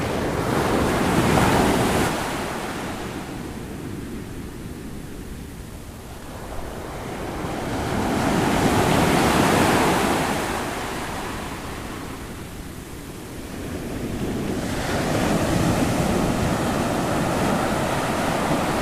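The receiver's jitter buffer had built up more audio than its target and cut the excess by repeatedly removing short slices a pitch period or so long. This jitter buffer speed-up shows up twice. From 5.17 to 6.54 s the sound runs about 14% fast, with roughly a fifth of a second removed. From 11.69 to 13.52 s it runs about 7% fast, with roughly 0.15 s removed. Pitch stays unchanged, but both passages sound hurried.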